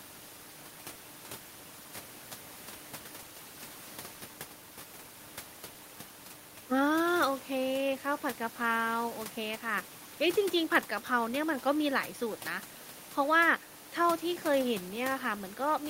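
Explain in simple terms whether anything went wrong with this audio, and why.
Nothing went wrong with this speech recording; the faint background noise you might notice is just the ordinary noise of the room the microphone was in, sitting well beneath the speech and belonging to the recording itself.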